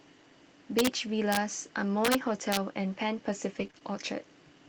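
A gain stage in this speech recording overflowed instead of limiting, so peaks pushed about 1 to 2 dB past full scale wrapped to the opposite sign. This integer overflow produces harsh cracks at 0.79 to 0.87, 1.33 to 1.37, 2.05 to 2.15 and 2.52 to 2.57 s.

From 3.55 to 3.65 s, lost packets were rebuilt from the error-correction copies carried in the following packets, covering about 60 ms, which fits three packets. These rebuilt frames sound rougher and noisier.

Short concealed packet loss follows at 3.67 to 3.71 and 3.71 to 3.75 s. The decoder extended the preceding sound to fill each missing 20 ms, causing brief smears.

Another packet is rebuilt from error correction at 3.75 to 3.77 s, adding a moment of grainier sound.

A final concealed gap at 3.79 to 3.82 s leaves one more short smear.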